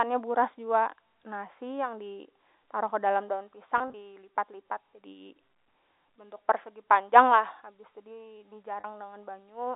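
From 3.78 to 3.94 s, packet loss with pitch repetition breaks the speech. Short gaps, none over 20 ms, scatter across 160 ms. The receiver repeats the last pitch period, so the sound briefly holds and buzzes. At 8.80 s, a 40 ms loss does the same over the telephone band.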